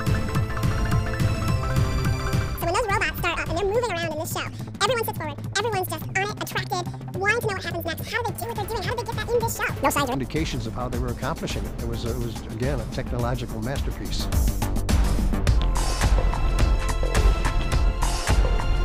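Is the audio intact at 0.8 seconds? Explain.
No. At 0.8 seconds you're inside a stretch, from the very start to about 10.15 s, where the audio was read two samples at a time, so it plays at double speed. The reader treated each pair of samples as a single frame, as if the stream had two channels or samples twice as wide. The result is everything rushing by at 2x and sitting a full octave, 12 semitones, higher than it should.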